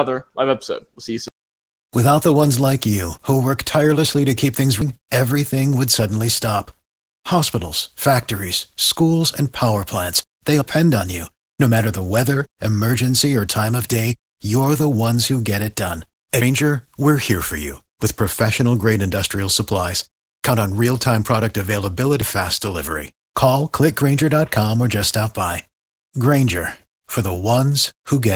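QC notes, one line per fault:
Throughout, Opus voice compression: hybrid mode at 16 kbps leaves the speech plainly muffled and hoarse, with a faintly robotic edge from coarse excitation coding.
4.82, 10.62, 16.42, 22.22 s, audio missing between chunks: a fifth-of-a-second skip roughly every six seconds, e.g. "they" jumps to "on you", likely from lost audio at chunk handovers.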